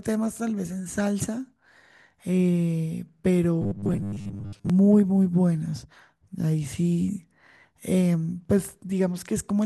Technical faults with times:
3.62-4.70 robotic sound from repeated short buffers

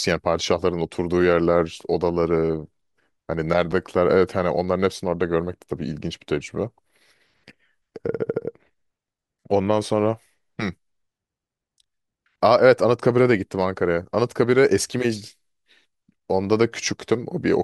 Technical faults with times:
3.72 CD skip

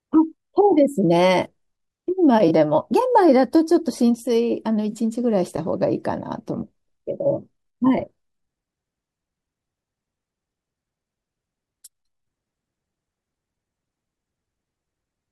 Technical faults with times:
2.48-2.51 AAC frame loss with concealment
4.91-4.95 AAC frame loss with concealment

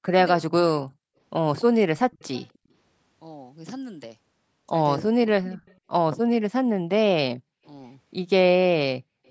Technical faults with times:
0.00-0.15 speech suppressed in double talk
0.50-0.63 speech suppressed in double talk
2.11-2.58 echo leak
5.04-5.58 speech suppressed in double talk
5.54-5.77 echo leak
9.26-9.31 echo leak

